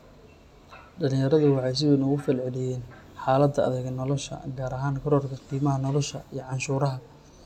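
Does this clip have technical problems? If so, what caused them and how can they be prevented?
No, this clip has no technical problems, so there is nothing to prevent.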